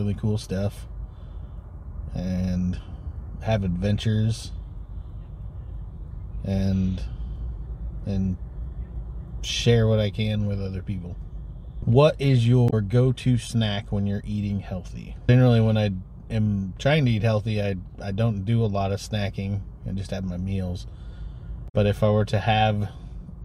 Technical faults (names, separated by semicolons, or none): damaged data in a compressed stream